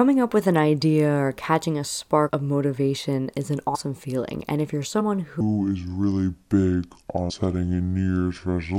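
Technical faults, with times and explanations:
2.28, 3.74, 4.99 and 7.29 s: compressed frames skipped. The first jump follows "idea or catching a", the second "of motivation is an", the third "if you're". The speech leaps ahead by roughly 100, 100, 50 and 150 ms, which fits whole frames of about 23 ms. Overlapping frames turn each join into a short smeared blip, not a click.
5.41 s to the end: section at the wrong speed. The speech plays at 0.657 times its proper rate. It drags and sits roughly seven semitones lower. Speed and pitch fall together at that moment, likely because the section was played against the wrong clock.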